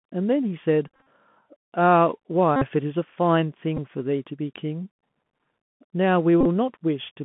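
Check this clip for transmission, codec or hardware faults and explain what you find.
Two faults are present. The whole clip carries Bluetooth CVSD headset codec damage, and the link repeats headset packets in four places.

The Bluetooth CVSD headset codec runs throughout. The speech is held inside a narrow 150 to 3400 Hz band. The 64 kbps one-bit coder steps up or down each sample and cannot keep pace with loud, bright sounds. S sounds turn scratchy, and a granular hiss sits under the voice.

Bluetooth headset packet repeats occur at 0.88 to 1.07 s, 2.56 to 2.66 s, 3.77 s and 6.41 to 6.46 s. When voice packets are lost, the chip decodes the previous packet again. Each repeat lasts 3.75 ms, so a run of them produces a steady buzz near 267 Hz. The first event scatters 127.5 ms of losses over about 190 ms, with the longest buzz around 40 ms. The second loses 52.5 ms. The third loses 11.2 ms. 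The last loses 37.5 ms, with the longest run about 20 ms.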